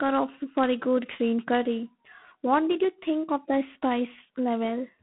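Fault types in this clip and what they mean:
G.726 ADPCM: a telephone codec coded each sample as a few bits of difference from a prediction, leaving coarse quantisation noise. A harsh, rasping hiss tracks the speech level, which fits a 24 kbit/s rate, and nothing above 3.8 kHz survives, giving a thin telephone band.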